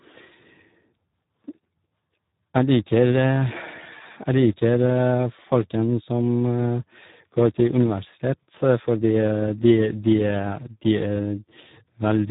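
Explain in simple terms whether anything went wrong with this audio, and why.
The speech was squeezed through the Speex codec, an older voice-chat compressor, set to a very low quality for the whole clip, from start to finish. At that setting it keeps only a rough sketch of the voice's buzz and discards most fine detail. The result sounds hoarse, grainy and somewhat mechanical. Everything above about 3.8 kHz is gone as well, so the voice also sounds dull and muffled, like an old phone line.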